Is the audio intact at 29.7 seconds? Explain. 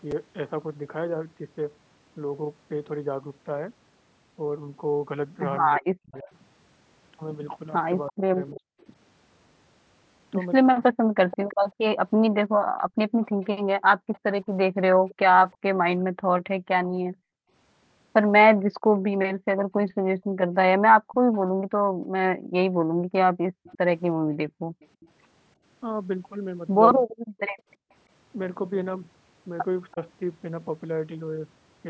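No. From 21.12 to 29.93 s there is an echo leak: a faint copy of the talker returns about 339 ms late, roughly 30 dB below the direct sound. This is likely a loudspeaker echo that the far end's echo canceller failed to fully remove.

Speech suppressed in double talk also runs from 27.03 to 29.98 s. The level dips sharply, by up to roughly 40 dB, in brief pieces totalling about 0.4 s, likely because the canceller attenuated the talker while trying to suppress the overlapping echo.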